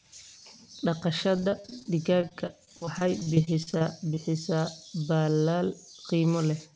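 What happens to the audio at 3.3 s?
Repeated packet loss (robotic sound) is under way at 3.3 s, within a stretch from 1.36 to 4.19 s. Packets keep going missing, 23 gaps up to 41 ms each, and each hole is patched by extending the preceding sound, leaving choppy audio with pieces missing.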